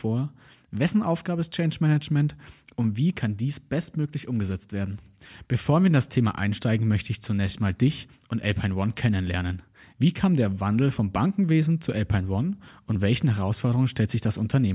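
Nothing in the recording stood out as a technical problem on listening.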